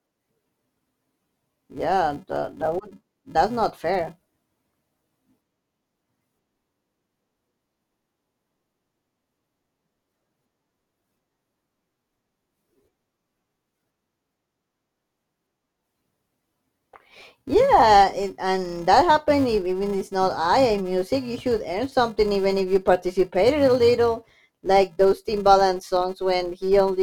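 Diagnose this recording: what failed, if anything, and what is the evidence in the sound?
A filter restarted on every block in the processing chain: a steady 375 Hz buzz tracks the speech level throughout, which fits a 128-sample block losing its state each time.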